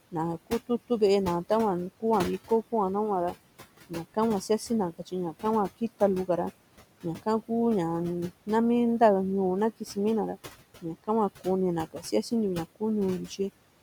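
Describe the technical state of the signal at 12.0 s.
At 12.0 s the signal falls inside a stretch of speech cut by the noise suppressor, running from 11.86 to 12.13 s. The suppressor misread part of the speech as steady noise and pulled it down by up to about 18 dB, so roughly a tenth of a second of the speech sounds swallowed and faint.

Noise suppressor artifacts are also present here, as they are across the whole clip. The suppressor cuts the background by about 18 dB frame by frame, lowering it between phrases and letting it return under the speech.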